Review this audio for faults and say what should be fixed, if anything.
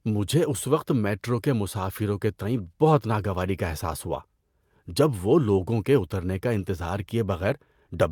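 No faults turn up in this audio, so nothing needs to be fixed.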